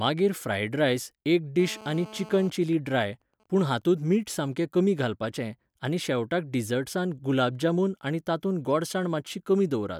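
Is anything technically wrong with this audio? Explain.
Yes, there are two related faults. From 1.6 to 2.45 s a hard, raspy buzz sits under the speech, about 19 dB below it, with a fundamental at 217 Hz and a dense stack of harmonics that ignore the speech entirely. This is GSM phone buzz. A 2G phone close by is in an active call, transmitting in bursts 217 times a second, and the audio circuitry rectifies those radio pulses into an audible tone at the burst rate.

At 2.45 s the steady buzz breaks into even ticks with a longer 217 Hz buzz twice a second that continue until 4.85 s. These are GSM signalling bursts, much quieter at roughly 30 dB below the speech. The same phone is still in its call, but its user has gone silent, so it transmits only short groups of bursts instead of a continuous stream, and the rectified pulses arrive as that broken, rhythmic pattern.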